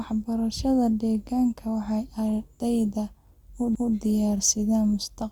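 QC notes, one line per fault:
3.75 s CD skip: the speech is cut by a sharp tick and a near-instant dropout of only a few milliseconds, then resumes from a different point, so the flow of the sound jumps rather than continuing. The player's laser was knocked off its track, or thrown by a flaw in the disc, onto another turn of the spiral. It muted briefly while it relocked, then carried on reading from that other turn.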